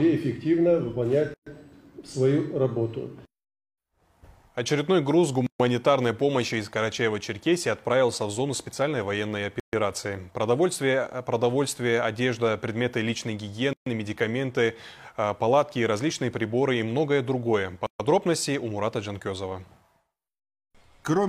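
At 1.34 s the sound drops out for about 125 ms, then there's a gap at a join of encoded pieces at 5.47, 9.60, 13.73 and 17.86 s, each about 133 ms, so one roughly every 4 seconds. The audio was clearly encoded in separate chunks and butted together untrimmed, so each encoder's start-up delay and final-frame padding stay in as silence. You hear a short hole, its edges smeared by the codec, before the sound picks up exactly where it stopped.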